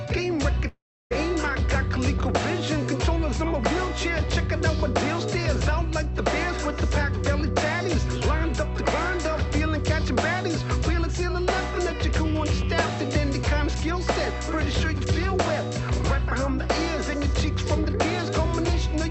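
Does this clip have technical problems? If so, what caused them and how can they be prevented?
Yes. A likely long network dropout stopped audio arriving from 0.67 to 1.13 s. Concealment stretched the last sound into a fading buzz, then silence, and about 0.44 s of audio never returned. A steadier connection, helped by forward error correction and a deeper jitter buffer, would prevent this gap.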